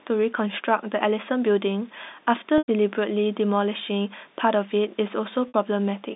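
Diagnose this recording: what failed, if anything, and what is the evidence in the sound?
The failure is in the network stage: packet loss with pitch repetition. At 2.58 s the sound holds on a buzzy, repeated cycle, then fades to silence before returning with a quick cross-fade at 2.68 s, a 100 ms hole. At 5.48 s there's a shorter 60 ms gap, ending at 5.54 s. The receiver bridged each gap by looping the last pitch period and fading it out. The telephone band behind it stays intact.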